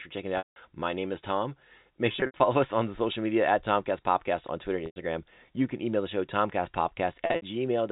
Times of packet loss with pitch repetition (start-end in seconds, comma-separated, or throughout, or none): 0.38-0.56, 2.12-2.40, 4.86-4.96, 7.26-7.42